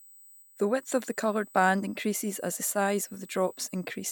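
Throughout the speech runs USB whine: bus microframe current leaking in as a fixed 8 kHz tone, strongest at 16 kHz, well below the speech, drawing flat horizontal lines on a spectrogram.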